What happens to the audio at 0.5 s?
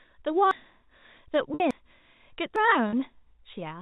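At 0.51 s there is a dropped buffer (overrun): the software likely failed to read its samples before the hardware overwrote them, so roughly 150 ms of speech vanishes. The two sides are spliced together with no gap, heard as a sudden jump forward in the speech.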